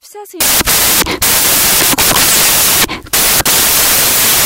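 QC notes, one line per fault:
0.40–4.46 s: samples built from the wrong bytes. Each sample's bytes are misassembled, so low-order bits dominate. This sounds like loud, harsh broadband noise, close to white on loud sounds.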